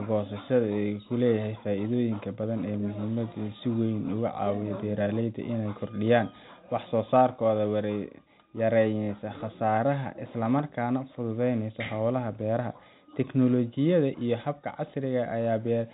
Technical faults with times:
none

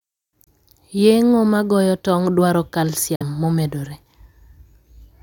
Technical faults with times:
0.44-0.47 Bluetooth dropout
3.15-3.23 Bluetooth dropout

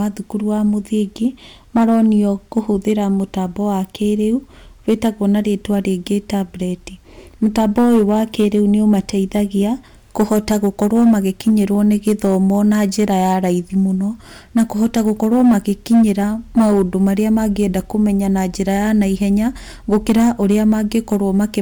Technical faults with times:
0.00-21.61 hard clipping

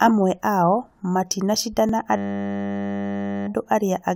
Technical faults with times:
1.89 overlap between stream segments
2.16-3.47 system hang loop

